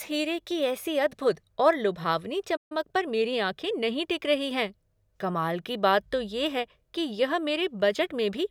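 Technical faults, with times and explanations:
2.56–2.72 s, playback stall: The player most likely ran dry of buffered data or had its output thread blocked right after "अद्भुद और लुभावनी", so nothing reached the output for about 139 ms. The speech cuts off mid-flow into silence, then resumes.
2.72–3.64 s, time-compressed catch-up: To work off the backlog left by the stall, the player snipped out short slices and cross-faded the joins, running at about 1.15 times normal speed until just before "नहीं टिक रही हैं". The speech sounds hurried but keeps its pitch.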